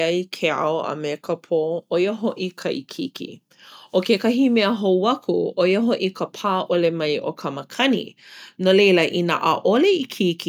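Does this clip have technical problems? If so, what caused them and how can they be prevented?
No, no technical faults here.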